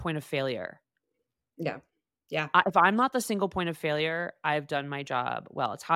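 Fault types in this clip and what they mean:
No technical faults can be heard anywhere in the speech signal, which stays steady and intact throughout.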